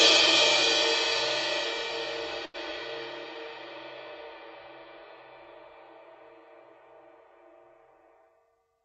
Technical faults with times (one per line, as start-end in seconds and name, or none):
2.45-2.56 short stall from a late packet
7.93-8.82 jitter buffer speed-up